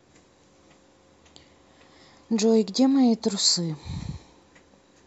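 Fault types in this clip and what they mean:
Word clock ticks: from 0.61 s to 4.97 s, about ten sharp ticks arrive steadily, roughly one every half second. The receiving device's unlocked clock drifts against the sender's, dropping or repeating one sample at each slip, which fits a mismatch of around 40 ppm.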